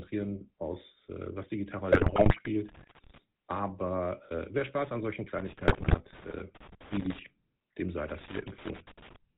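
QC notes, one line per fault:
throughout: GSM full-rate codec. The speech is band-limited with nothing above 4 kHz and has a constant buzzy, gravelly grain, which fits 13 kbps full-rate coding. The encoder keeps a vocal-tract filter and a coarse, regularly spaced pulse excitation, so the fine detail of the voice is replaced by a rasping texture. This is a steady, even colouring, unlike the sudden, short disruptions below.
1.92–2.48 s and 5.68–5.96 s: GSM bit errors. Right after "aus äh was die" and again after "an solchen", the voice breaks into squawks, gargling and level jumps. Corrupted filter, pitch and gain parameters reach the decoder, so each damaged frame is rebuilt with a warped spectrum or blown-up gain. The sound is tonal and voice-shaped because the decoder still synthesises speech-like frames. Crackle does not do that.
2.69–3.18 s, 5.39–7.19 s and 8.08–9.16 s: loose connector crackle. 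Irregular bursts of scratching and pops come in, the last one starting after "dem sei". A worn or dirty contact makes and breaks rapidly as it shifts, which chops the signal and throws clicks from any DC on the line. The sound is broadband, erratic and unrelated to the voice's pitch. That separates it from the codec squawks that overlap it near 5.7 s.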